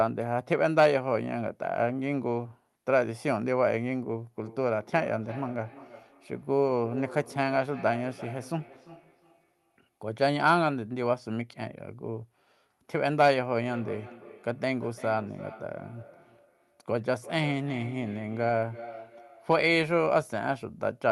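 Speech clip with feedback echo between two devices from 4.43 to 10.73 s and 13.68 to 19.88 s: a second device replays the audio and its microphone re-feeds it, so thinning, ringing repeats recur roughly every 300 ms, peaking about 17 to 18 dB below the speech.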